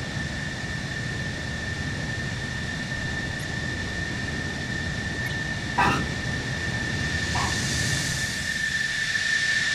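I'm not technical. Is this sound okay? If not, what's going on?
No. There are two short glitches, each a corrupt frame decoded. One comes at 3.39 to 3.44 seconds, the other at 5.25 to 5.28 seconds. Each sounds like a quick chirp or blip that doesn't belong. Audio is sent in small packed chunks. Here a few chunks arrived slightly scrambled, and the player played them anyway. For a split second, the sound lands at the wrong pitches. The first blip is a little louder than the second.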